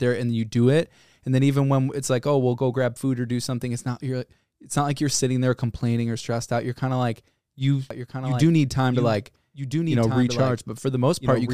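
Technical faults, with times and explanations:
7.91 s to 11.54 s, doubled audio track: from 7.91 s to the end, a second full-band copy of the speech sits about a second and a half behind the original, roughly 5 dB quieter. It cuts in abruptly, with no decay tail or added room colour, so it sounds like the same audio replayed on top of itself rather than an echo. This is likely a second capture through a slower path, or two out-of-step copies left in an edit.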